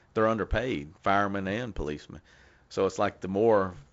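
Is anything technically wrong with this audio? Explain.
No, nothing here counts as a fault; it's simply speech carried over G.722 wideband telephone coding, so the top end stops at around 7.7 kHz and there's a faint touch of that codec's usual upper-band hiss, which is just how the format sounds.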